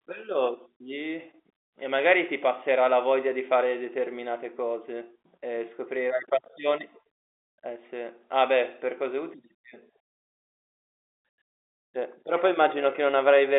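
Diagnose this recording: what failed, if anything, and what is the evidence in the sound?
Nothing failed here: the speech sits in an ordinary telephone band of roughly 300 Hz to 3.6 kHz with nothing above about 3.8 kHz, which fits a normal G.711 mu-law phone line doing its job with no more than faint coding noise under the voice.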